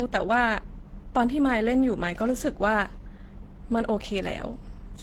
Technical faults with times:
0.00-5.02 transcoding between lossy codecs

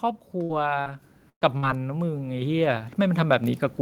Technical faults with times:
0.43-0.51 burst of packet loss
0.81-0.88 short concealed packet loss
1.02 microphone volume stepped up
1.30-1.64 burst of packet loss
2.42 microphone volume stepped up
3.44 microphone volume stepped up

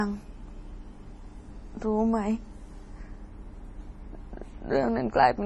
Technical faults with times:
0.00-5.46 low-bitrate audio saved at a high bitrate

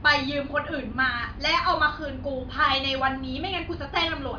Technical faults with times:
none

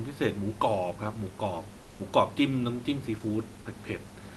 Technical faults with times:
1.81-1.99 comfort noise in place of the background

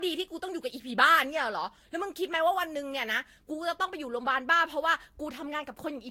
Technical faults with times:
0.00-6.11 generation loss

